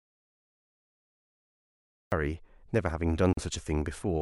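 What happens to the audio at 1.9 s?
At 1.9 s an audio dropout to silence is under way, from the start to 2.12 s: flat silence, no room tone, likely a lost input.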